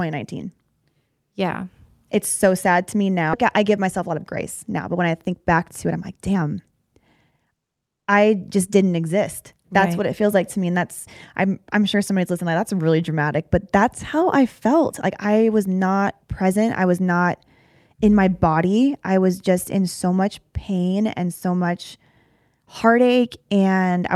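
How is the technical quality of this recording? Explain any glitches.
Two network playback faults affect the recording, both near the start.

Right after "so sad to me", at 3.33 to 3.35 s, the speech jumps forward with no gap, and roughly a second of audio is lost. This is a skip ahead: audio was dropped while later audio was already waiting, so the two sides of the jump are joined almost directly.

From 3.57 to 7.97 s, ending just before "I just didn't exist", the speech sounds hurried, running at 113% speed with no change in pitch. This is a jitter buffer speed-up. The receiver had too much audio queued and trimmed many short pitch-period pieces, removing around 0.7 s in total.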